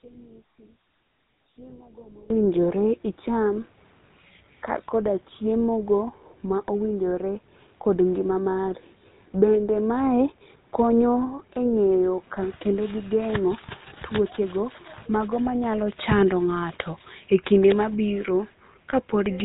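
Speech, heard through a GSM full-rate codec for its whole length. The voice is buzzy and gravelly, with plainly audible codec damage. Nothing comes through above 4 kHz. The codec rebuilds the voice from a vocal-tract model driven by coarse pulses, and the sound fits a 13 kbps rate. From 0 to 2.3 s the voice drops by about 25 dB and turns faint. The likely cause is one channel inverted. With reversed polarity on one side, the centred voice cancels when the two channels are summed to mono, leaving only their faint difference. From 1.70 to 1.73 s there is a brief rough, metallic ring. These are lost GSM frames. The decoder repeated the last good frame's settings, and the short gap fits a single lost frame.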